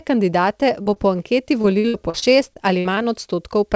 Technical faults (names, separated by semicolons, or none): short concealed packet loss; repeated packet loss (robotic sound)